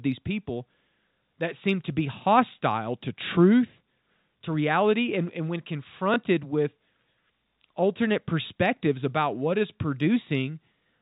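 At 6.14 to 6.16 s, packet loss with the last packet repeated: one 20 ms stretch of speech went missing, which fits a single lost packet, and the receiver replayed the previous one. Instead of a silent gap, there's a small blip, over the narrow telephone band of the G.711 line.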